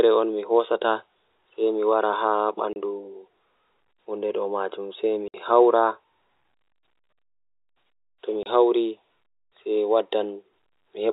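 At 2.73–2.76 s, 5.28–5.34 s and 8.43–8.46 s the speech drops into dead silence: packet loss filled with silence. The 30 ms and 60 ms holes fit a 30 ms packet length. Unlike smoothed concealment, the gaps are true silence with abrupt edges, heard over the band-limited G.711 telephone sound.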